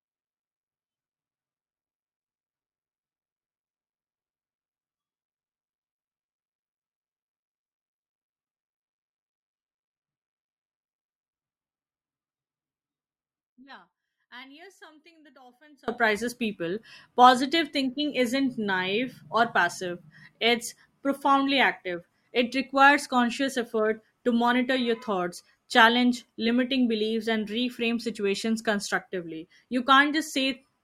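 From 0 to 15.88 s the speech is about 28 dB quieter, likely one channel inverted, so the shared centre cancels when summed to mono. Between 8.81 and 10.81 s codec artefacts abruptly rise, consistent with an adaptive stream at a lower bitrate, roughly an 8 kbit/s Opus version.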